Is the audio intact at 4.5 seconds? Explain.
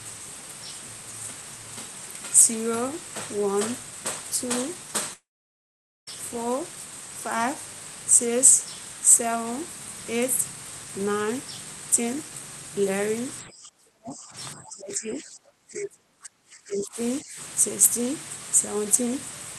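Yes, the speech at 4.5 seconds is intact, with no dropout, glitch or other fault at that moment.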